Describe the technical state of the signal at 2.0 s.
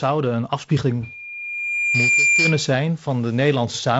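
At 2.0 s the signal is inside a loudspeaker feedback squeal lasting from 1.03 to 2.72 s, starting just after "een afspiegeling". The microphone is picking up its own loudspeaker, and at 2.4 kHz the loop gain exceeds one. That tone swells over about a second into a squeal about 5 dB above the speech.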